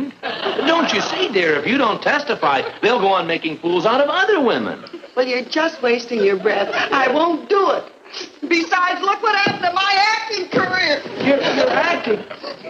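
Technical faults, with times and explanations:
No technical faults detected anywhere in the clip.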